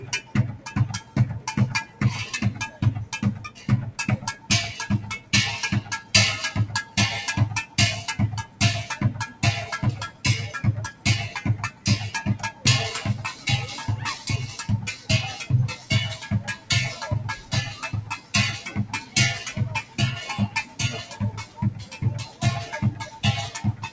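A speech-tuned noise suppressor is applied to these sounds throughout, treating steady tones and ambience as noise. Its gain swings by roughly 15 dB, so the sound pumps and thins. On a spectrogram, sustained bands fade between attacks, and the waveform envelope breathes unevenly.

The sound is cut by the noise suppressor from 0.0 to 13.46 s, about three seconds in all, and again from 14.97 s to the end. Held and decaying sounds drop by up to about 11 dB while onsets survive. Tails look truncated on the waveform, and sustained energy fades on the spectrogram. The call path's G.722 coding leaves nothing above 8 kHz.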